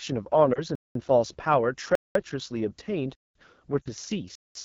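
Throughout, the speech has a rough, raspy edge. This is AMR wideband (HD Voice) codec damage, and it points to one of the lowest AMR-WB modes, around 8.85 kbit/s. At that rate the pulse-driven vocal tract model has too few bits to capture detail below 6.4 kHz. The band above it is filled with shaped noise rather than real content.

From 0.53 to 0.60 s there is a brief dip. This is a lost AMR speech frame, consistent with a single 20 ms frame that failed its checksum. The decoder stood in for it by repeating the previous pitch and vocal tract settings at reduced gain, so the sound sags and then recovers with a moment of roughness.

At 0.75, 1.95, 3.15 and 4.35 s the audio drops out abruptly for 200 ms each time. This is a gap between chunks. The holes recur at steady intervals, which fits audio delivered in blocks of about 1 s with silence inserted at each join. The likely cause is padding or a player starting each block late, so the timeline is interrupted even though no sound is lost.

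From 3.82 to 3.89 s there is a longer stretch of lost AMR speech frames, about 40 ms, which points to two consecutive frames. The concealment drops the sound to near silence within two frames. Because wideband concealment fades quickly, the level drops noticeably before the speech returns weak and rough for a moment.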